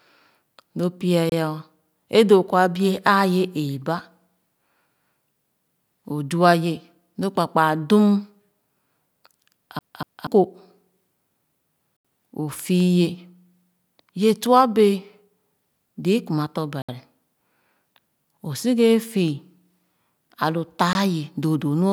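At 1.30 to 1.32 s the speech drops into a block of digital silence for about 25 ms. A run of samples has been replaced by zeros. The cut has no fade in or out. Something this short is heard as a short hole.

From 9.79 to 10.27 s the speech behaves like a CD stuck on one turn. A 240 ms slice plays, then jumps back and plays again, twice in all. A brief mute sits at each jump. The result is a quick, even stutter, like a skipping disc.

At 11.97 to 12.05 s there is a longer block of digital silence, 80 ms. This one is a clear hole in the speech.

Right after "kuma tɔ̄", at 16.82 to 16.89 s, a 65 ms silent block cuts in. It is again abrupt.

At 20.93 to 20.95 s a final 20 ms block of zeros leaves one more short gap. These blocks are the kind of gap left when an output buffer is not filled in time.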